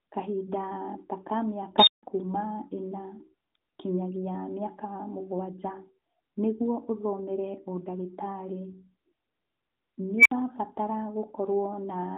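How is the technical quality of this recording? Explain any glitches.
Two glitches stand out in this speech recording, both from an unstable filter. From 1.78 to 2.03 s a high squeal, roughly 4 kHz, swells over about 90 ms, clips, then drops into 160 ms of silence. From 10.18 to 10.31 s a lower tone near 2 kHz builds over about 73 ms and is followed by 60 ms of silence. In each case a recursive filter fed itself runaway gain until its arithmetic overflowed and it reset. Unlike acoustic feedback, which settles into a sustained howl, this rises almost instantly and then goes abruptly dead. The recording carries AMR narrowband mobile codec band-limiting, with nothing above about 3.8 kHz.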